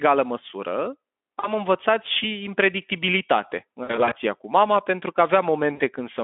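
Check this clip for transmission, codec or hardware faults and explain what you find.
There is one fault: VoIP packet loss concealed by the speech codec, at 1.40–1.49 s just before "învățat și impredictibilitate în", at 3.83–4.15 s before "cu mama pentru că" (about 140 ms lost in short gaps), and at 5.73–5.81 s after "cu mama pentru că". The decoder extrapolates its last pitch and filter with falling gain, so the sound becomes a buzzy tone or coloured noise that fades. On a spectrogram the harmonics flatten into frozen horizontal lines. On a waveform the cycles repeat and decay. The telephone-band Speex coding underneath is consistent with a 200–3500 Hz line.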